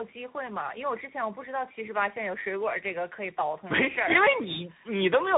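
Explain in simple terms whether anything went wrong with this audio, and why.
Tandem speech coding runs through the whole clip, from start to finish. The speech sounds as if it passed through two different speech coders in a row, each re-squeezing the other's already damaged copy. That leaves it rough, muffled and warbly, with nothing above 3.8 kHz.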